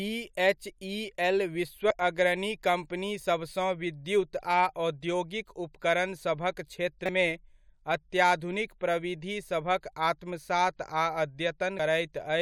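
Three brief bursts of damaged data in a compressed stream break into the speech, at 1.90 s, from 7.06 to 7.09 s, and at 11.79 s. At each point the encoded bytes were wrong, so the decoder misread the frames, lost sync and hunted for the next valid header, producing a chirp, squawk, click or short hole.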